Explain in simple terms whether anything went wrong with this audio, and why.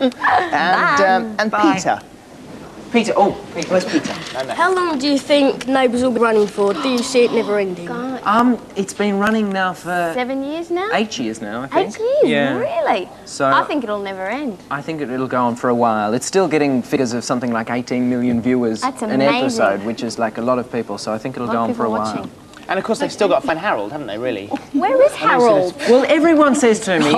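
Compressed frames skipped: the player dropped short blocks of the encoded file, about 26 ms each, as missing or damaged. At 6.17, 16.96, 23.49 and 25.29 s the sound jumps ahead by under a tenth of a second, leaving a brief glitch at each join.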